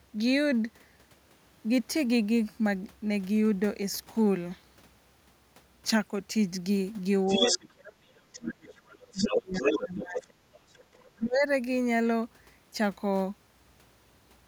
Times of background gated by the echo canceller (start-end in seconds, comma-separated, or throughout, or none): 10.85-10.89